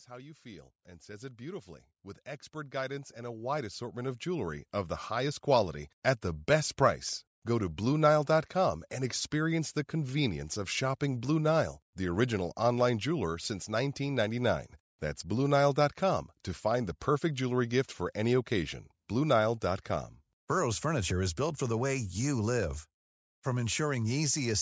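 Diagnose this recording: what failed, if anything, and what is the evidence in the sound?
Automatic gain rising at the call processing stage: from 0.07 s to 6.52 s, speech and background swell together by about 18 dB as the gain control, judging the input too quiet, turns up. The waveform envelope ramps steadily; a spectrogram shows the noise floor brightening alongside the voice.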